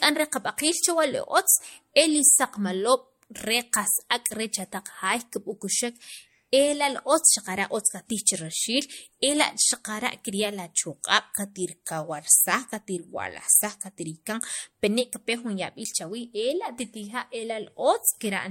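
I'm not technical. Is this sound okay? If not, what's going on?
No. The whole clip has generation loss: it sounds swirly, hollow and smeared, likely from being saved as MP3 about three times over.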